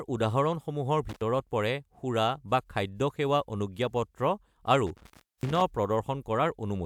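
A speech recording with two bursts of intermittent contact, as a loose cable or plug briefly opens the line. The sound cuts out for about 87 ms within 1.09–1.22 s, then for about 376 ms within 4.87–5.62 s, each gap edged by crackle and filled with faint hiss. Unlike a digital dropout, which falls to clean silence with abrupt, tidy edges, these breaks are ragged and noisy at both ends.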